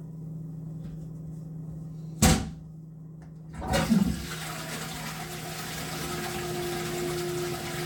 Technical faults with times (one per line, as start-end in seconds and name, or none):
none